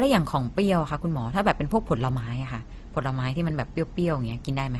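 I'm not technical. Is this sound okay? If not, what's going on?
No. Throughout the speech, the sound has the mixed flaws of transcoding between lossy codecs. It was likely squeezed by one compression format, then another, so both sets of flaws stack up. Nothing above 18.7 kHz remains.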